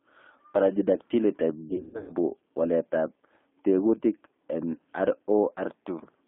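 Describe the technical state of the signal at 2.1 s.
At 2.1 s the signal is near the end of VoIP packet loss concealed by the speech codec, running from 1.68 to 2.12 s. About 280 ms of audio went missing, scattered over 400 ms, with the longest gap 140 ms. The decoder filled each gap by extending its last pitch and filter at falling gain. The result is a buzzy tone or a coloured noise that fades. The sound stays weak or distorted as packets resume.

The G.729 codec is also active here, as it is throughout. The band runs from 250 Hz to 3.6 kHz, which fits an 8 kbit/s G.729A stream. The codec rebuilds speech from a filter, a pitch predictor and a few pulses per frame. That damage is plainly audible as a rough, synthetic edge.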